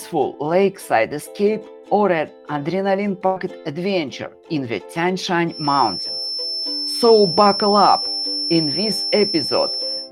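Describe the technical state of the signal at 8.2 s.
At 8.2 s a feedback whistle is present. It runs from 5.45 s to the end of the clip as a thin, steady 5.4 kHz tone only a few decibels below the main sound, swelling and fading slowly in level. The likely cause is a loudspeaker-to-microphone loop held just at the point of feedback, sustaining one frequency without running away.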